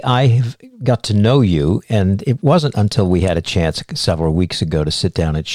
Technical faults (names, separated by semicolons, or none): none